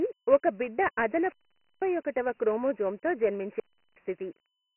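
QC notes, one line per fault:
Throughout: Dialogic VOX ADPCM. The speech sounds gritty and boxed-in, with a coarse hiss riding along with it and nothing above 3 kHz. The 4-bit adaptive coding at 24 kbps, a rate that fits 6,000 samples a second, quantises heavily and cuts the top of the band.
0.99–2.00 s and 3.46–4.02 s: wireless microphone squelch dropout. Each event has a burst of hiss and then a hole of near silence, about 0.50 s and then about 0.37 s long. The speech comes back after it. The radio signal faded and the receiver's squelch muted the output.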